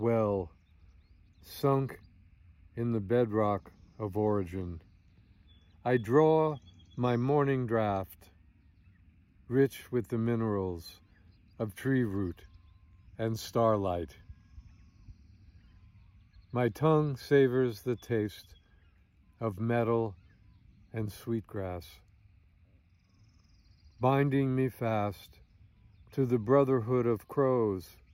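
Nothing in the recording stood out as a technical problem on listening.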